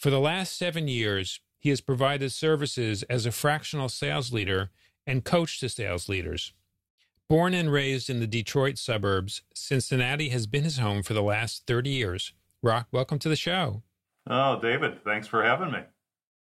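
Nothing in this speech recording stands out as a technical fault, so there's nothing here to flag.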